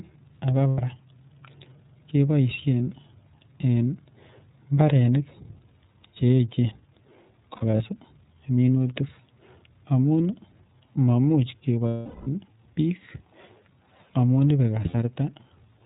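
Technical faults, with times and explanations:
throughout, iLBC codec: The sound is band-limited, clear but slightly rough and synthetic, and the coding damage is plainly audible. iLBC codes each frame's excitation independently, and the coarse quantisation leaves a grainy, buzzy edge. The frame timing fits 30 ms frames at about 13.3 kbps. On a spectrogram, all energy stops at a hard ceiling at 4 kHz with nothing above it. Harmonics below that look slightly smeared and noisy.
0.70–0.81 s, 7.56–7.81 s, 11.88–12.27 s, 14.88–14.95 s, lost iLBC frames: Each gap becomes a held, buzzy or breathy vowel-like tone. The decoder fills missing frames by repeating the last pitch cycle mixed with noise, and fades it as the loss continues. The longest fill runs 0.39 s near 11.9 s and audibly decays. The event near 7.6 s is broken into short scattered runs, the longest about 70 ms. Because each frame stands alone, normal sound returns almost at once. 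A spectrogram shows flat, unchanging harmonic bands. The waveform shows repeated, noisy cycles that shrink in amplitude over the longer losses.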